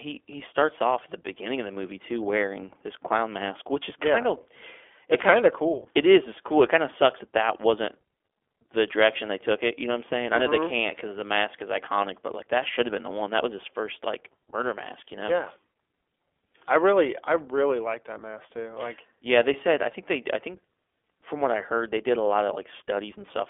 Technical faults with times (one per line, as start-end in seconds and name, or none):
0.00-23.50 iLBC codec